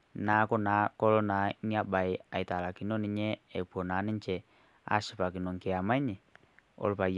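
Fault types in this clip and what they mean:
No faults can be heard anywhere in the recording.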